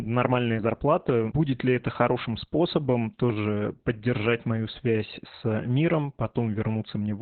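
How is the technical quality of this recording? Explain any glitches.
Technical quality is poor throughout. From start to finish the speech sounds muffled, hoarse and faintly robotic, as if heard over an old phone line. That is heavy Opus voice compression. The codec is running in its SILK linear-prediction mode, and the sound points to a very low bitrate of around 8 kbps. That pushes it down to narrowband, so nothing much above 4 kHz survives, and the coarsely coded excitation adds the rasp and buzz.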